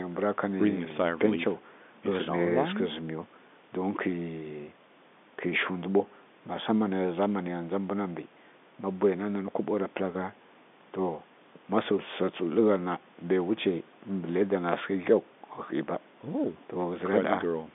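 Nothing stood out on listening to this telephone-band speech, which carries the narrow, capped-at-about-3.8 kHz sound of an ordinary G.711 line.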